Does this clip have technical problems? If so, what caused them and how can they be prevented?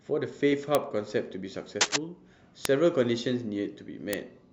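Yes. Three bit error spikes occur, at 0.75 s, 2.65 s and 4.13 s. Each is a single hard tick reaching about -3 dBFS, unrelated to the speech around it and spread evenly across the spectrum. The one at 2.65 s spans three consecutive samples rather than one. A flipped bit in memory or on a digital link makes a sample value jump by a power of two and then snap straight back, producing this kind of tick. Prevention: use error-checked digital links and storage, and replace any faulty interface or cable carrying the digital stream.

Cable scratch noise runs from 1.81 s to 1.96 s. It is a dense, uneven burst of rustling and scratching laid over the speech, somewhat louder than the speech itself. The likely cause is a worn cable, connector or control being moved, making its contact resistance fluctuate rapidly and inject noise bursts into the analogue signal. Prevention: clean or replace worn connectors and cables, secure them against movement during recording, and avoid adjusting suspect controls while recording.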